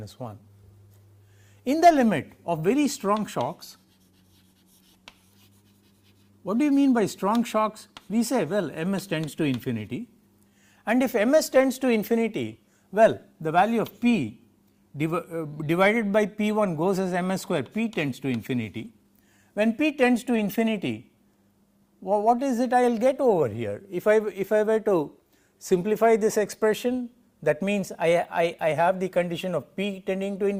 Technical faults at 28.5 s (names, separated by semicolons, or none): clock drift between sender and receiver; repeated timing corrections; drift correction step